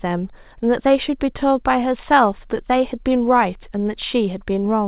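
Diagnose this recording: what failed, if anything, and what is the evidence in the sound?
Nothing in the recording points to a failure at any stage: the speech arrives through ordinary mu-law G.711 telephone coding at 8,000 samples a second, so the band stops at 4 kHz and the faint quantisation noise rises and falls with the level, as that format is meant to.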